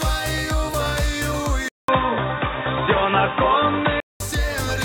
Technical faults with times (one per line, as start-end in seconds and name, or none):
1.68-4.20 input switched to a poorer device